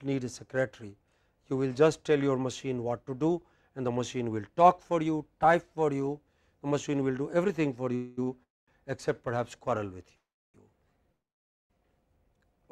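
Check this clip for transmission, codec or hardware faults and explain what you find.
Two network-delay faults appear, both stretching the audio's timing rather than removing any of it.

Call audio freeze at 7.95 to 8.19 s, 8.43 to 8.70 s, 10.16 to 10.56 s and 11.12 to 11.72 s: the last sound continues as a fading buzz or hiss, and in the three later ones it drops to silence for about 220, 320 and 520 ms. The likely cause is packets held in transit, emptying the jitter buffer. On a spectrogram these look like smeared, decaying bands followed by blank columns, and the waveform shows a tapering tail and then a flat line before resuming.

Short stall from a late packet at 8.23 to 8.29 s: one packet arrived late and the receiver stretched the preceding sound for about 39 ms before carrying on. It is heard as a brief held sound with a slight buzz or dip, a short horizontal smear on a spectrogram.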